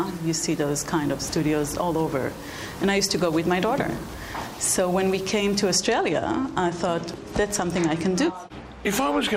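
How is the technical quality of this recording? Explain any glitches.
The recording has one clear flaw. From 0.0 to 5.72 s, the sound turns grainy. The grit shifts with the signal and sits roughly 25 dB below it. This is likely low bit depth without dither, with the sound rounded to about 6 bits.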